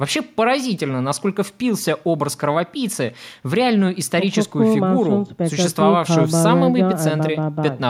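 Nothing technical goes wrong anywhere in this bit of speech, so there's no fault to point to at any moment.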